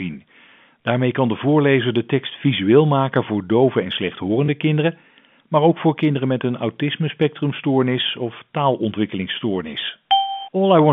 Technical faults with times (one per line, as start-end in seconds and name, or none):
4.46-4.48 packet loss with last packet repeated